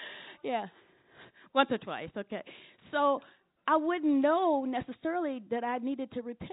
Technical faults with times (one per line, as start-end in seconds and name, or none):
none